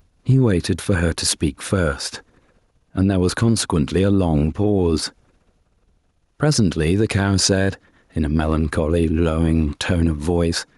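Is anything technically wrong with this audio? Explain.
Yes. Gain pumping runs throughout the speech. The gain swings by around 5 dB, squashing levels together, likely from excessive input gain driving a fast limiter. A waveform shows the noise floor rising between phrases, and a spectrogram shows background energy brightening in gaps and dimming under speech.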